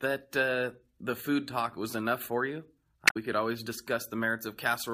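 At 3.05 to 3.16 s, just before "could always", damaged data in the compressed stream makes the decoder misread frames and lose sync, producing a brief glitch. On a spectrogram it shows as a 0.12 s disruption; the waveform shows an abrupt break.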